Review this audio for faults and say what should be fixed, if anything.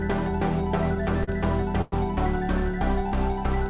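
At 1.24 to 1.29 s there is a short stall from a late packet. The last sound is held for about 38 ms, with a faint buzzy smear, and then the audio picks up exactly where it stopped. Nothing is lost; everything after it simply arrives 38 ms later. It differs from a freeze because it is brief enough to sound like a stretched sound rather than a hole with a fading tail. A deeper jitter buffer, or adaptive buffering that grows before it runs dry, would absorb a delay this small.

From 1.81 to 1.94 s there is a call audio freeze. For about 107 ms the sound turns into a continued buzz that fades without reaching silence, then resumes from the same point, pushing the rest of the clip 107 ms later. The likely cause is packets held up in the network until the jitter buffer emptied. It differs from the stall above in its length and in the audible decay of the filler, where the stall only stretches a sound briefly. 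On the G.711 mu-law path, with nothing above 4 kHz, the fill is band-limited too. Steadier network routing, or a jitter buffer sized for delay spikes of this length, would prevent it.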